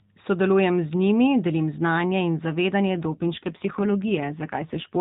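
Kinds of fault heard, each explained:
AMR rate drop: From about 2.89 s to the end, the speech turns buzzier and more synthetic, as though the mobile codec had been told to spend fewer bits on the voice and more on protecting them. The roughness fits a step down from the 12.2 kbps mode toward 5.9 kbps. Unlike a packet dropout, there is no gap. Unlike a bandwidth switch, the band stays the same narrowband telephone range it had before.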